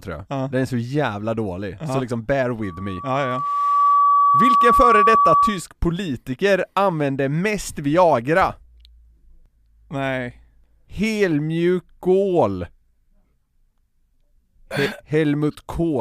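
From 2.62 to 5.64 s, a loudspeaker feedback squeal: the microphone re-amplifies its own loudspeaker until a 1.1 kHz tone swells over about a second and a half, ending a few decibels above the speech. A spectrogram shows one bright horizontal line; the waveform's envelope bulges steadily.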